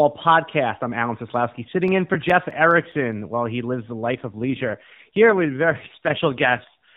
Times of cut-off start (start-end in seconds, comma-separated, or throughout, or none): none